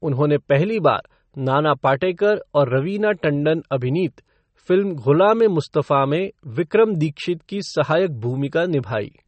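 Throughout, the speech sounds plainly watery and swirly, with nothing above 8.3 kHz, likely from MP3 compression starved of bits, which fits a 32 kbps encode.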